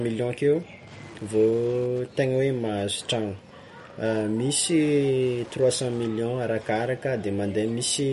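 Throughout all 8 seconds, a nearby Wi-Fi radio is coupling into the audio circuit, which rectifies its transmissions into the signal. This Wi-Fi interference follows the beacon period of 102.4 ms, so it is heard as a steady ticking about ten times a second under the speech. The ticks sit around 30 dB below the speech.

Also throughout, the speech has passed through what is likely MP3 compression at a low bitrate, one that fits about 48 kbps. With so few bits available, the encoder discards weak frequency components, and these flicker on and off from frame to frame. The damage is plainly audible as a watery, swirling texture, with metallic chirping on s sounds and smeared consonant onsets. Nothing remains above 11.2 kHz, so the top of the speech sounds dull.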